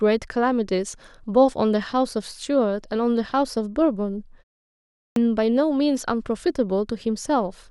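A speech clip with one fault: a clipped start after a pause at about 4.77 s. After a short gap of about 0.42 s, the output seems to have dropped into a sleep state and takes roughly 0.39 s to wake back up, so the audio returns at 5.16 s with the opening of the phrase simply gone. The next word lurches in out of silence, already mid-sound, with no proper onset.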